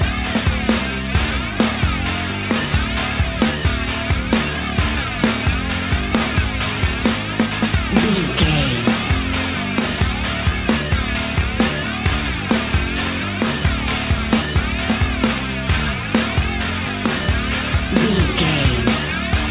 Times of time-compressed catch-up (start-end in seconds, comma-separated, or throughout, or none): none